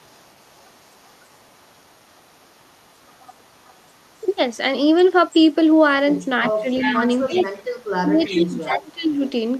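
A faint delayed copy of the speech trails about 336 ms behind it from 0 to 4.57 s and again briefly at 5.28–5.55 s. It grows clearly louder at 6.12–7.85 s and eases to a moderate level from 8.21 s to the end. This is an echo leak, likely from a far-end loudspeaker whose echo canceller let part of its microphone pickup return.

From 6.54 to 9.22 s the main speech dips in pieces, falling at its deepest by about 25 dB, for roughly two seconds in total. This is speech suppressed in double talk, likely the canceller turning down the talker along with the overlapping echo.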